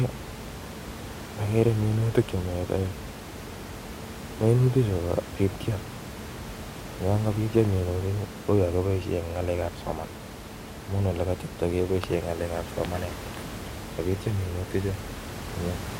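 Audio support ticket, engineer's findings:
No system fault found in the speech signal; the background noise audible throughout comes from the room at the microphone, sitting about 12 dB below the speech.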